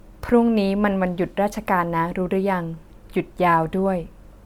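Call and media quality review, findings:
Generation loss, whole clip, speech throughout. Swirly, hollow texture with smeared consonant attacks, worse than one MP3 pass should sound, though the band still runs up to about 20.1 kHz. Likely cause: repeated lossy re-encoding, around seven passes, fitting a 128 kbit/s MP3 chain. Each decode and re-encode re-quantises on a shifted frame grid, so noise and spectral holes stack up. Worth finding where the chain transcodes.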